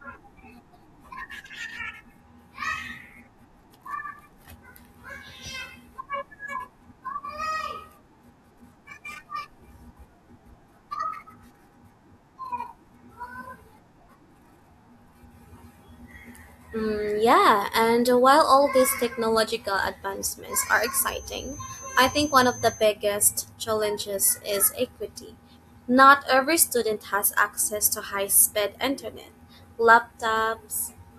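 A loudspeaker-to-microphone loop was likely held right at the edge of feedback from 20.44 to 22.89 s, so a single frequency near 6.2 kHz kept ringing without building into a howl. The result is a feedback whistle: a thin, steady high tone sitting roughly 20 dB under the speech, swelling and fading slowly in level for those two and a half seconds before dropping away.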